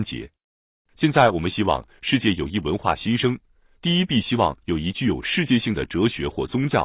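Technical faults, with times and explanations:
No technical faults can be heard anywhere in this speech clip. Nothing in the audio calls for a time or an explanation.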